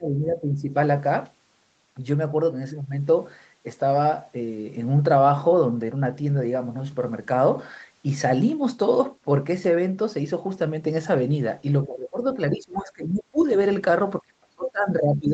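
From 0 to 0.69 s, 11.83 to 12.18 s, 12.34 to 13.39 s and 14.21 s to the end, the speech sinks by about 10, 15, 25 and 30 dB. This is likely speech suppressed in double talk, with the echo canceller ducking the talker.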